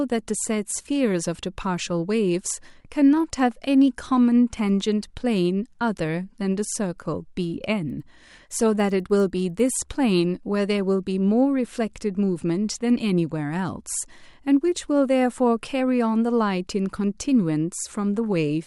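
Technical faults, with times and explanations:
7.7 to 9.8 s, resampler restarted on every block: the upsampling was done in separate 100 ms chunks. At each chunk edge the filter lacked its real neighbouring samples, so every edge carries a tiny glitch, giving a steady 10 Hz ticking on the speech.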